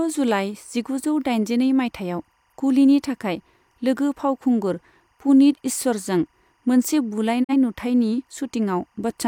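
Throughout the speech, timecode bleed sits far beneath the voice, roughly 45 dB down: a faint chirping warble flipping between pitches near 1 and 2 kHz. Its steady rhythm fits 24-frame code leaking from a neighbouring line, unlike mains hum's low, unchanging buzz.

At 7.43 s, a digital broadcast dropout fades the sound out over about 20 ms and leaves a hole until 7.54 s. Some 43 ms of programme is gone, which fits a single lost frame. The muted gap, rather than a click or stutter, distinguishes it from a buffer glitch.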